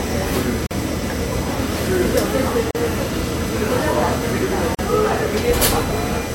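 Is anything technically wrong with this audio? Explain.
Yes, there are two problems.

USB whine, throughout: current drawn in 1 ms bus frames leaks through power or ground, adding a steady 1 kHz whine, loudest at its 2 kHz harmonic, roughly 20 dB below the sound.

Gap at a join of encoded pieces, at 0.67, 2.71 and 4.75 s: separately encoded pieces were joined with their start delay and end padding left in, so the sound drops out for 43, 40 and 40 ms every 2 s, then resumes where it stopped.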